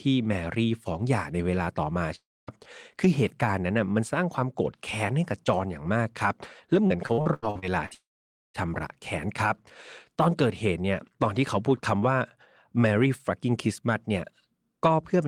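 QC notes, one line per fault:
2.15 to 2.50 s, long network dropout: the speech stops for about a third of a second, most likely because the stream lost a run of packets. The receiver stretches the last bit of sound into a fading buzz before roughly a quarter second of silence takes over, and the speech then picks up a little further along. The missing piece isn't replayed.
6.87 to 7.93 s, repeated packet loss (robotic sound): eight separate holes across this stretch, the longest about 87 ms. Each one is covered by carrying the last sound forward, and another hole follows soon after, so about a third of this stretch is patched rather than real. That stop-start filling gives the choppy, robotic quality, and pieces of the speech are simply missing.
7.94 to 8.57 s, long network dropout: this one runs right on from the choppy section and is longer, around 0.6 s gone, likely from another break in the network stream. 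There's a brief fading continuation of the last sound, then about half a second of silence, and the speech resumes past the missing portion rather than where it left off.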